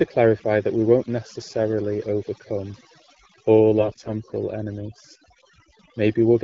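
Overdone noise removal runs through the whole speech clip: the noise reduction is set so strong that frequency bands near its noise estimate are pulled down to almost nothing, leaving a lowered background that breaks up into twinkling specks. AMR bit errors strike from 3.80 to 4.10 s, a stretch that fits about fifteen 20 ms frames. Roughly one bit in ten of the less protected data arrives flipped, so the pulses driving the voice model land wrongly and the finer pitch, gain and spectrum values drift, turning the voice hoarse, scratchy and gargly while pitch and level roughly hold. This sits on an AMR wideband (HD Voice) link running at 12.65 kbit/s, a rate at which speech is clear.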